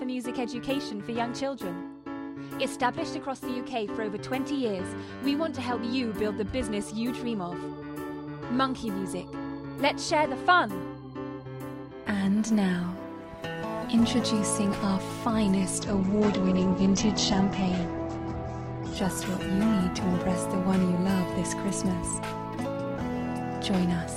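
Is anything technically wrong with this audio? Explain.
Yes. From 15.82 to 21.77 s there is a call bitrate drop: the estimated bandwidth collapsed, so the encoder was forced from what sounds like about 128 kbps to roughly 9 kbps. It coded far more coarsely and cut the top from 20 kHz to 8 kHz, leaving rough, muffled audio, worst for about 2.9 s.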